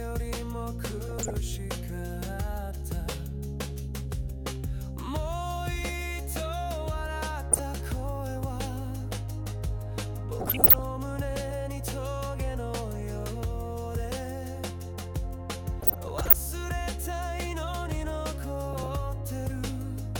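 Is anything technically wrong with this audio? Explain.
Yes. DAB burbling occurs at 1.09–1.34, 7.52–7.64, 10.40–10.79, 15.81–16.33 and 18.73–18.96 s. Bit errors slip past error correction into the MP2 data, putting short blips of noise into single sub-bands and making individual sub-bands lurch in level.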